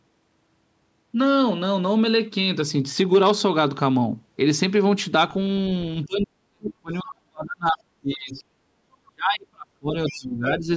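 From 6.05 to 8.42 s the speech sinks, falling by roughly 40 dB at its deepest across about two seconds of the span. This is speech suppressed in double talk, likely from an echo canceller that heard both ends talking at once, could not tell the local talker from loudspeaker echo, and pulled everything down. Inside that stretch, from 6.65 to 6.69 s, a brief scrap of a second voice slips through, roughly 10 dB below the speech. That is the other side's voice leaking through, likely loudspeaker sound that the canceller failed to strip from the microphone.

At 8.67 to 8.76 s the room sound dips by about 7 dB for roughly a tenth of a second and then comes back. This is background gated by the echo canceller: while the loudspeaker was active, the canceller clamped the microphone, taking the ambience down with it, then released it.

The speech collapses again from 9.04 to 9.95 s, dropping roughly 35 dB for about a second, and once more from 10.11 to 10.69 s, this time by roughly 20 dB for about half a second. 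Both are further speech suppressed in double talk, likely the same canceller again ducking the talker while the far end was active. Overlapping the start of that last dip, from 10.06 to 10.15 s, a faint leak of the other side's voice sits roughly 20 dB under the speech, likely more residual loudspeaker echo getting past the canceller. The call's microphone processing limits the whole clip to nothing above 8 kHz.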